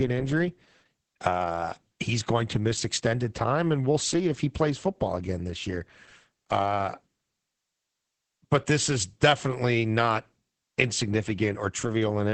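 Throughout the speech, Opus voice compression in SILK mode leaves nothing above 8.6 kHz and codes the excitation coarsely, which fits about 10 kbps, giving a muffled, hoarse, slightly robotic sound.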